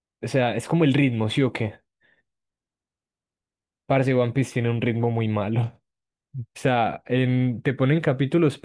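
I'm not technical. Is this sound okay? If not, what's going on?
Yes, no faults can be heard.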